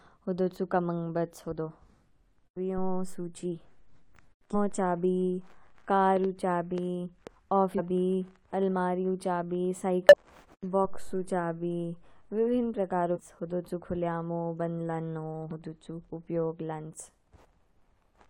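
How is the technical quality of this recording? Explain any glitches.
The recording has two kinds of technical fault: brief compressed-stream glitches scattered through the speech, and a short burst of loud clicks.

Short chirps and blips occur at 4.50–4.55 s, 7.74–7.80 s, 10.09–10.14 s just after "अलमारीयू चाबी", 13.12–13.18 s just before "हूदू चू खूलयामू", and 15.51 s. These come from damaged data in the compressed stream. The decoder misreads corrupted frames, loses sync and jumps to the next frame header.

From 6.17 to 7.28 s there is a train of clicks: roughly four sharp pops at an uneven pace, about 2.7 per second, standing around 10 dB above the speech. The clicks are similar in shape, likely from electrical interference or a faulty connection or power supply.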